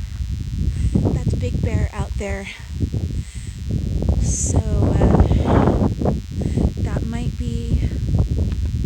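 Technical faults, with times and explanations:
Throughout, DECT cordless phone buzz: a thin, steady buzz sits under the whole clip, pitched at 100 Hz but edgy and bright because it carries a dense ladder of harmonics above that fundamental. It stays roughly 30 dB below the main sound. A nearby DECT handset or base station sends a short radio burst every 10 ms, and the audio circuitry rectifies each burst into a click, so the clicks repeat at 100 per second and fuse into a buzz.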